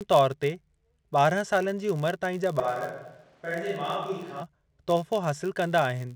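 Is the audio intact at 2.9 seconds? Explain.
No. A switch to a distant microphone runs from 2.60 to 4.42 s, just after "ताईं जा". The sound abruptly turns roomy and hollow, loses bass, drops about 5 dB, and gains room noise about 30 dB below the speech, likely because the close microphone dropped out.

A filter restarted on every block also affects the whole clip. The filter loses its state at each block boundary and starts again from silence, so each block opens with a small transient. This produces a level-following buzz near 86 Hz, which fits a 512-sample buffer.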